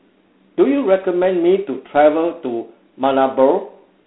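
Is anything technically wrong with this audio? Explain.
Yes. Throughout, the speech went through G.726 ADPCM with too few bits per sample, apparently 24 kbit/s, leaving a harsh rasping hiss that tracks the speech level, and nothing above 3.9 kHz.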